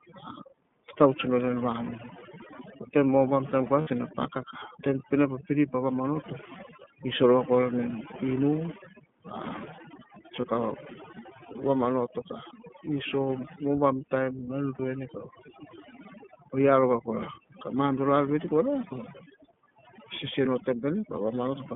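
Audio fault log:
Throughout: overdone noise removal. The noise suppressor is pushed too hard, dropping individual frequency bands whenever they sit near its noise estimate, so the background becomes near-silent with twinkling specks and the speech loses its quiet detail.
Throughout: iLBC codec. Speech passes through a narrowband VoIP codec at 13.33 kbps with 30 ms frames, and the line band runs from about 150 Hz to 3.5 kHz, so nothing higher survives. The coding damage is plainly audible as a rough, slightly synthetic edge.
3.81, 10.40 and 14.75 s: lost iLBC frames. At 3.81 s, just before "ne paka taim", 60 ms drops out; at 10.40 s and at 14.75 s, right after "na en", 30 ms each. The decoder fills each gap by repeating the last pitch cycle with added noise, heard as a brief held, buzzy vowel, and since each frame stands alone, the speech returns to normal almost immediately.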